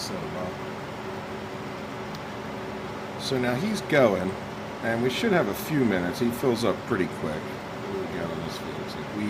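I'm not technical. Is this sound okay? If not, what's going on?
Yes, no faults to report.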